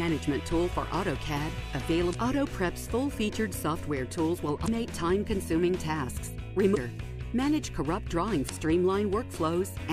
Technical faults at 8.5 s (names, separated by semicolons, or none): damaged data in a compressed stream